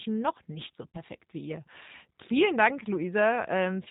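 This speech clip has passed through the G.729 codec, whose low-rate coding models each 10 ms frame as a vocal tract filter, a pitch predictor and a few pulses. Nothing above 4 kHz survives, and the voice comes out plainly rough and synthetic throughout, which fits an 8 kbit/s G.729A link. From 0.91 to 0.97 s, between "noch nicht so" and "wie ihr", VoIP packet loss concealed by the speech codec leaves a gap of about 30 ms that the decoder fills by extending its last pitch and filter at falling gain, so the voice smears into a brief, fading buzzy tone or coloured noise.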